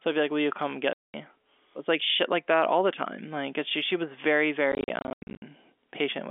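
From 0.93 to 1.14 s the speech vanishes into a hard-edged 210 ms hole. From 4.72 to 5.42 s scattered gaps total 410 ms, the longest 90 ms. This is packet loss filled with silence, with gap lengths fitting 10 ms packets.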